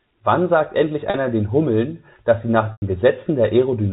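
At 1.10 to 1.14 s and again at 2.72 to 2.82 s, the speech suffers packet loss with pitch repetition. The receiver repeats the last pitch period to fill each gap. The 40 ms loss, consistent with two 20 ms packets, sounds like a briefly held, buzzy tone. The 100 ms loss fades to silence over about 50 ms before the speech cross-fades back in.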